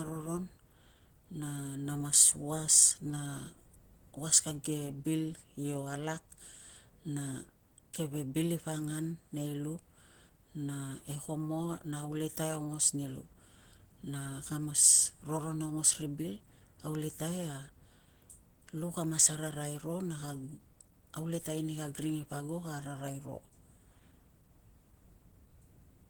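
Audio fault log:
throughout Opus compression: likely an Opus encoder starved at a rate fitting about 16 kbps in hybrid mode, leaving the speech plainly hoarse, rough and grainy.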